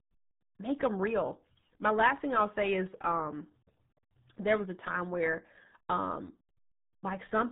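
From start to finish the speech carries RealAudio 14.4 codec damage: an 8 kbit/s dial-up coder removes everything above 4 kHz, leaving the sound muffled and gargly throughout.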